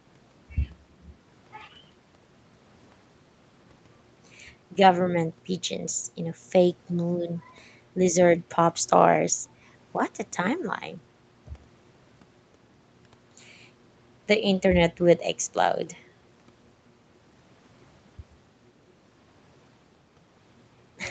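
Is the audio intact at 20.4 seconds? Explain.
Yes, the speech at 20.4 seconds is intact, with no fault at that moment.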